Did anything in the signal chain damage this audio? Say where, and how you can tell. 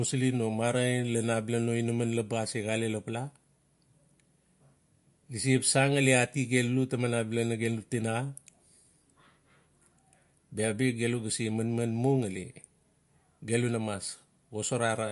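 Yes. The damage sits at the codec stage and runs through the whole speech clip. Nothing is present above 11.2 kHz, a hard treble ceiling of the kind an encoder imposes when bits run short. The sound is plainly watery and swirly, with weak high detail flickering in and out and s sounds turning chirpy. That points to MP3 compression, likely at a low bitrate near 48 kbps, where quiet frequency lines are dropped frame by frame.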